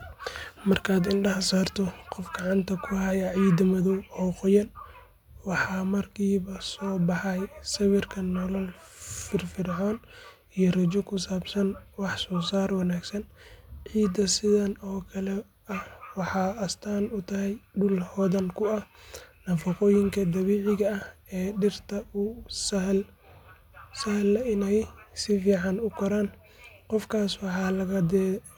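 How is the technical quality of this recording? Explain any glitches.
No technical faults can be heard in the recording; the signal stays continuous and stable, with nothing audible that needs explaining.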